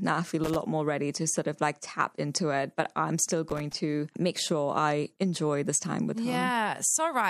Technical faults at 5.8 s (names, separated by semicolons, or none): none